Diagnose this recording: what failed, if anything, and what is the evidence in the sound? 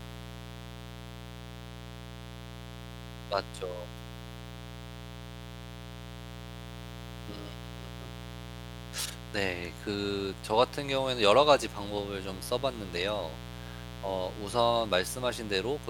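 A steady, raspy buzz sits under the speech for the whole clip, fairly loud at roughly 15 dB below it. This is mains buzz from the analogue wiring: a 60 Hz supply couples in sharp switching spikes whose harmonics spread well into the kilohertz range.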